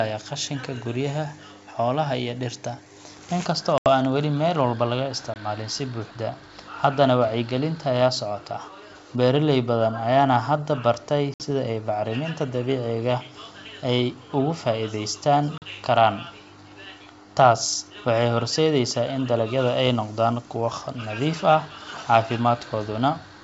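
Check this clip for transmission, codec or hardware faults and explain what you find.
The clip has four dropouts from packet loss on an ADPCM call: at 3.78 to 3.88 s (80 ms lost), 5.34 to 5.36 s (20 ms), 11.34 to 11.43 s (60 ms) and 15.58 to 15.63 s (40 ms). Missing packets were replaced by silence, and the receiving decoder's predictor and step size then no longer matched the sender's. Each hole has hard edges, and the speech resumes at an off level or with a click and brief distortion before settling. The wideband G.722 coding through the clip sounds clean, consistent with its full 64 kbit/s mode.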